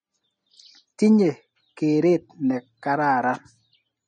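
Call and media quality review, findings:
Throughout: speech watery and swirly, smeared attacks; likely MP3 compression, fitting about 40 kbps. Unlike a plain low-pass, weak lines toggle between frames, causing swirl.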